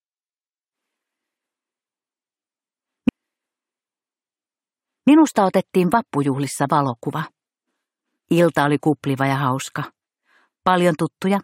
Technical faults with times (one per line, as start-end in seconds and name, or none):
3.08-5.07 stream segment repeated